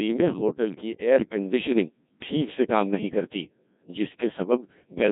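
Heavily robotic, buzzy speech throughout points to a Codec 2 vocoder near 1.6 kbit/s, which rebuilds the voice from sine waves using only pitch, voicing, energy and a spectral envelope.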